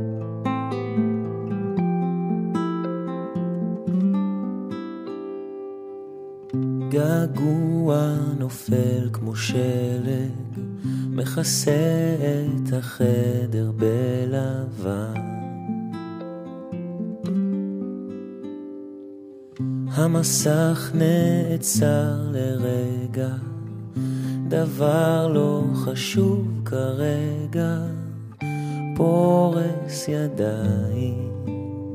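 Nothing in the audio stood out as a problem on listening.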